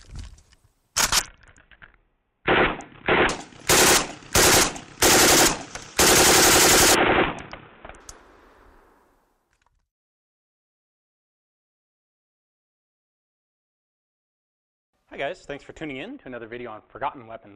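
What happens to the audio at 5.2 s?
Nothing goes wrong at 5.2 s; the audio plays through that point intact, with no dropout, click or other fault.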